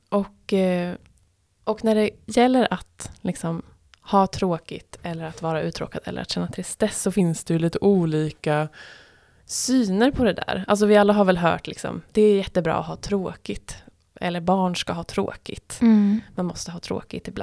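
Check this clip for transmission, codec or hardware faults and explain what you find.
One fault is present, a wrong sample rate from 7.2 to 9.4 s, between "att känna tristess så" and "syner på det där". The speech slows to 0.92 times speed and drops about 1.5 semitones, which fits 24 kHz audio played at 22 kHz. Unlike a pitch shift or time-stretch, speed and pitch fall together.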